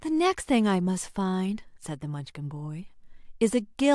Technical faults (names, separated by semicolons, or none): none